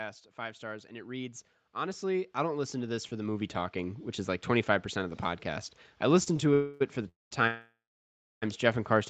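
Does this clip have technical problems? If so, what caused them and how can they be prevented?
Yes. From 0.35 to 5.73 s the automatic gain control, judging the input too quiet, steadily raises its gain by about 16 dB. The result is automatic gain rising: the speech and the background noise behind it swell together over those five seconds rather than holding a steady level. This could be prevented by setting the microphone's input level correctly from the start, or by limiting how fast and how far the gain control may adjust.

At 6.23 to 6.28 s, just before "to it for the", there is a short stall from a late packet. One packet arrives late, the jitter buffer runs dry, and the receiver stretches the last sound by about 29 ms until the packet arrives. Nothing is lost, but the sound is briefly held too long before it resumes. A jitter buffer with slightly more headroom would absorb a delay this small.

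Three longer call audio freezes follow, likely caused by packets held up in the network: at 6.54 to 6.82 s, and after "to it for the" at 7.08 to 7.33 s and 7.47 to 8.44 s. Each time the receiver carries the last sound forward as a fading buzz or hiss, which becomes silence for about 0.17 s in the second freeze and 0.64 s in the third. The audio then resumes where it stopped, so gaps of roughly 0.27, 0.23 and 0.95 s are inserted into the speech. The codec limits the bandwidth to 8 kHz throughout. A more stable connection, such as a wired link instead of congested Wi-Fi, would prevent these freezes.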